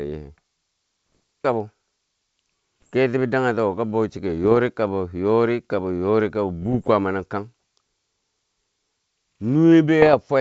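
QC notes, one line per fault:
1.15–1.17, 2.82–2.90, 4.44–4.57, 6.62–6.88 and 10.02–10.17 s: bit errors on an ADPCM link. Pops and rough bursts appear, with the longest at 6.62 s. A few tenths of a percent of flipped bits knock the decoder's step size and predictor off, so each hit rings on briefly with brief level jumps over the otherwise clean wideband G.722 sound.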